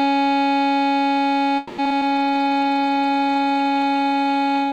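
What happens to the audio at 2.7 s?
At 2.7 s the music is inside a call bitrate drop running from 2.06 s to the end: the bandwidth estimate fell, cutting the encoder from 48 to 18 kbps, with 1.35 s at the lowest rate. The coarser coding dulls the top end and roughens the music.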